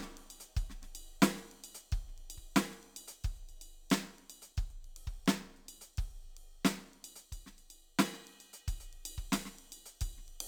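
Imaging from linear upsampling runs through the whole music clip. The rate was raised from 22 kHz to 44.1 kHz by straight-line interpolation. The top end sounds dulled. A mirrored copy sits between 11 kHz and 22.05 kHz, roughly 20 dB down, adding faint metallic shimmer.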